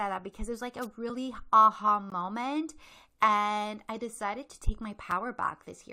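From 0.82 to 0.86 s there is a wireless microphone noise hit. The FM radio link from the microphone fades briefly, most likely because reflected paths cancel the direct signal at the receiver, so the receiver's own noise rises into the audio. For about 40 ms the speech is overlaid by a quick swish of static before the signal recovers.

At 2.10 s and again at 5.11 s there is a gap between stream segments. The stream is built from 1.0 s segments, and at these joins the timestamps of consecutive segments fail to meet, so the player inserts silence to cover the difference: about 17 ms at the first join and about 5 ms at the second. Each is heard as a hard-edged dropout in the speech, with no audio missing on either side.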